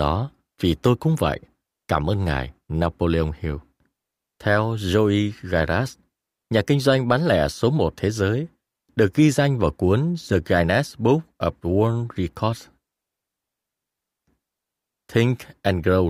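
No technical fault turns up anywhere in this speech recording. There is no event to place in time or to trace back to a cause.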